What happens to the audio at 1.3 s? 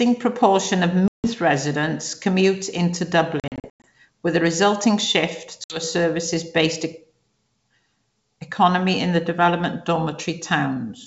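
Right around there the sound is coming out of a dropout. From about 1.08 to 1.32 s there's packet loss on the ADPCM call: roughly 160 ms of audio, several packets' worth, went missing and got filled with silence. The G.722 decoder's adaptive predictor and step size drift out of sync with the sender, so after that hard-edged gap the audio comes back slightly distorted, settling within a few tens of milliseconds.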